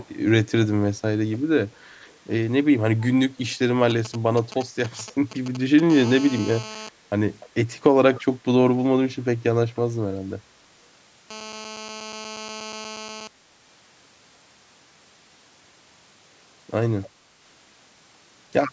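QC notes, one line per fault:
0.0–0.07, 1.32–2.17, 2.99–3.56, 4.89–5.15, 7.4–7.49, 8.16–8.22, 9.76–10.16 and 17.02–17.1 s: echo leak. A faint copy of the speech trails it by about 0.3 s, roughly 25 to 35 dB down, likely from a loudspeaker-side echo canceller letting residue through. It is a distinct delayed repeat, not the smeared decay of room reverberation.
3.90–5.80 s: GSM signalling bursts. A nearby 2G phone's radio pulses are rectified in the audio circuit and heard as a galloping pattern of short 217 Hz buzzes, roughly 15 dB below the signal. The stop-start rhythm separates it from the continuous call buzz.
5.90–6.89 and 11.3–13.3 s: GSM phone buzz. A hard, raspy, harmonic-rich 217 Hz buzz at about 15 dB below the signal holds steady through each stretch, from a 2G phone transmitting in a call. Its unbroken drone sets it apart from the intermittent signalling bursts.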